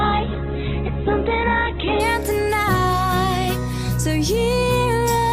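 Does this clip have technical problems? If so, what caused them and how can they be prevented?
Yes. From 0 to 2.0 s the sound is dull, with nothing above 4.1 kHz and strong codec artefacts. At 2.0 s it brightens abruptly, with no gap. This is an adaptive stream starting at a low bitrate, which points to a very low-rate Opus version before a much higher one. Starting on a mid-level version would prevent it.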